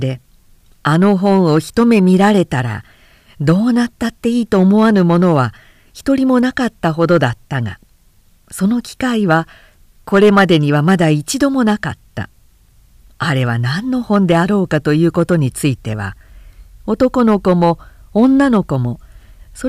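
Hard clipping runs through the whole speech clip: the level was pushed about 6 dB past what the chain could pass, so roughly one percent of samples hit the ceiling and get sliced flat. Those squared-off peaks throw out high harmonics, heard as crackly grit on the louder syllables.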